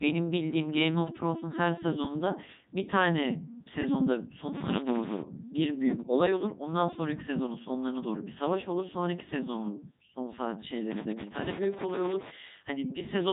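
Throughout the clip the speech has passed through a Codec 2 vocoder, which transmits only pitch, voicing, energy and a coarse spectral shape rather than the waveform itself. The decoder rebuilds the voice from summed sine waves, so the damage here is heavy: the speech sounds robotic and buzzy, with a synthetic edge. Nothing is present above 3.8 kHz. The quality fits Codec 2's highest-rate 3.2 kbit/s mode.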